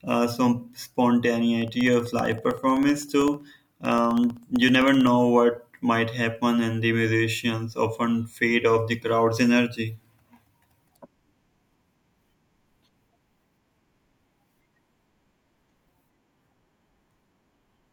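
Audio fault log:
1.62 to 5.07 s, periodic USB or driver dropouts: there's a run of little ticks under the speech here, spaced a steady 64 ms apart, so around fifty of them. Each is a tiny gap, roughly half a millisecond, where something on the USB bus or in the driver stalls at a fixed interval and the missing samples come out as silence. The sudden drop to zero and back is what makes the click, and you only hear it while there's signal.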